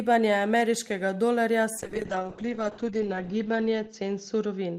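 Speech that turns rough, watery and muffled from 1.79 s to the end, losing everything above about 8 kHz. It's a call bitrate drop: the encoder was starved of bits, which fits a fall from around 32 to 8 kbps, bottoming out for 1.44 s.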